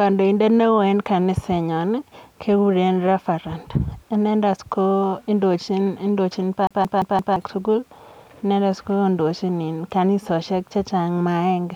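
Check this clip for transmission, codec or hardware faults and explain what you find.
One fault is present, a playback hardware fault.

From 6.67 to 7.36 s, after "inendet kondochin", the CD is stuck on one turn. A scratch knocks the laser back a track, so a 173 ms slice plays four times as an even stutter. The waveform and spectrogram show identical repeating blocks separated by thin silent gaps.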